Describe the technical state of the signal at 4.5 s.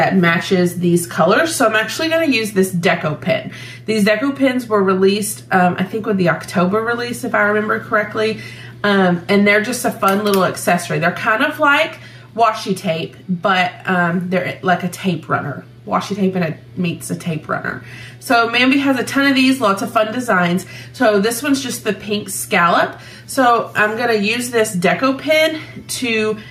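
At 4.5 s the signal shows gain pumping, present here as it is across the whole clip. The level swings by around 5 dB. The likely cause is input gain set well above what the microphone needs, with a fast limiter or compressor clamping down on every peak, so the dynamics sound flattened and squeezed.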